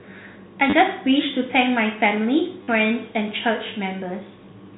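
Telephone-band speech, cut off above 4 kHz. Packet loss with the last packet repeated gives short robotic stutters at 0.70 to 0.73 s and 2.63 to 2.68 s, consistent with 10 ms packets.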